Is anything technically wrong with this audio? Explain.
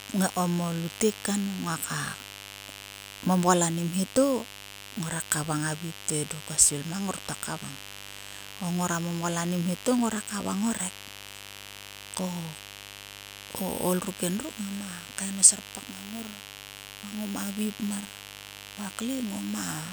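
Yes. Mains buzz runs through the whole speech clip, a steady raspy buzz well up in level, roughly 15 dB below the speech. Sharp switching spikes, twice per 50 Hz cycle, leak in and stack harmonics of 50 Hz into the kilohertz range. A spectrogram shows evenly spaced horizontal lines at 50 Hz multiples from start to finish. The waveform shows a regular 100 Hz spike train.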